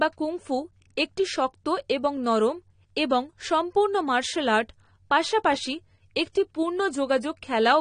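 Throughout the speech, the audio sounds dull and smeared, with a watery, warbling texture on sustained sounds and sibilants. A spectrogram shows a hard ceiling with nothing above 9.7 kHz and patchy, holed regions below it where bands drop in and out frame to frame. This is plainly audible AAC compression, likely from AAC-LC at a low rate; the damage fits a bitrate around 32 kbps, where the encoder discards high bands and coarsely quantises the rest.

From 6.33 to 6.35 s, just after "সম্পূর্ণ মার্শাল আর্ট পাশাপাশি", a short hiss runs ahead of a sharp onset and blunts its attack. This is pre-echo. The transform block containing the attack spread its quantisation noise across its full length, so noise sized for the loud onset leaked about 25 ms into the quiet gap before it. On the waveform, a low fuzzy ramp precedes the transient. On a spectrogram, a broadband smear appears just left of the onset edge.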